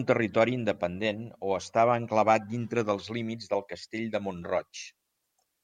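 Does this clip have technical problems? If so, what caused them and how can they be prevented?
No, the speech signal in this clip shows no audible technical faults, so there is nothing here that needs a cause traced or a prevention step.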